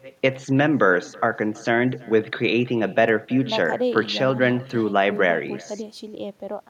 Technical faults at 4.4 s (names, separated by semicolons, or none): echo with no canceller